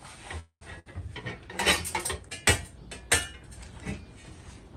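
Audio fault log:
0.39 to 0.63 s, call audio freeze: the sound stops moving forward and the last moment is held, fading away, ending in roughly 90 ms of silence. It then picks up exactly where it left off, with nothing skipped. This likely comes from packets stalling in transit until the jitter buffer ran dry. The receiver filled about 218 ms on its own, and everything after plays that much later.
0.79 to 0.88 s, burst of packet loss: the sound briefly turns into a short held smear that dies down. When it returns, it jumps ahead instead of resuming from the same point. A run of packets never arrived in time, so the receiver stretched the last sound across about 64 ms while lowering its level. Roughly 60 ms of the original audio is gone for good, which is why the sound skips forward.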